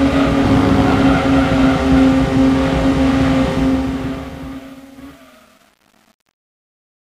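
Truncation distortion on a fade runs from 3.51 s to the end at 7.12 s. The fade-out, consistent with 8-bit undithered processing, turns gritty from 4.14 s onward.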